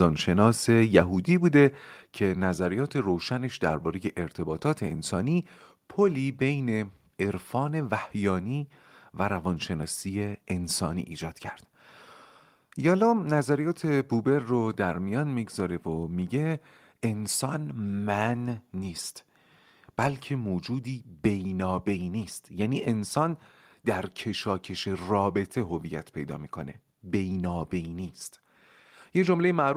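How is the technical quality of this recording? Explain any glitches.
Two abrupt level drops affect the opening of the recording. At 1.02 s and 2.04 s, speech and background each fall by about 3 dB in one step. This is the microphone volume stepped down, likely software lowering the input gain after judging the microphone too loud. On a waveform the envelope shrinks abruptly at each point, and a spectrogram dims across all bands at a sharp vertical edge.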